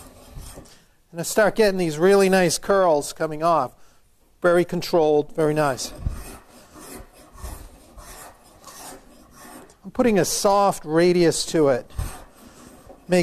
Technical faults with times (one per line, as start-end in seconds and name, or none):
6.02-6.06 corrupt frame concealed